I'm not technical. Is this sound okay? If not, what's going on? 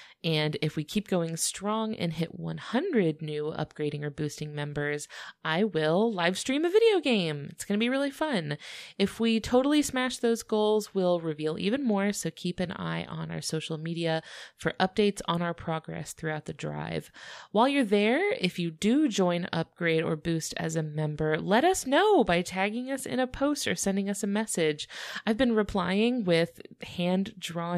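Yes, there are no dropouts, clicks, distortion or other technical faults to point to anywhere in this speech recording.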